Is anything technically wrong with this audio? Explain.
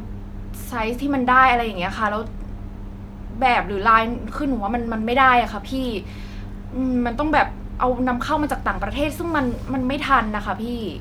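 No, nothing is technically wrong with this audio.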